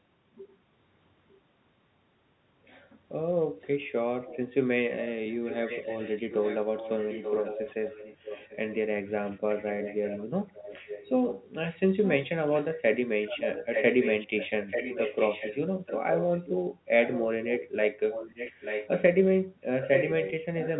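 A delayed copy of the speech follows it by 885 ms. It is faint at 1.29–1.4 s and 3.61–3.67 s, more audible at 4.25–4.38 s, and strong from 5.07 to 16.5 s and 17.05 to 19.02 s. From 19.81 s to the end it is as loud as the speech itself. This is an echo leak, likely from a far-end loudspeaker whose echo canceller let its microphone pickup through.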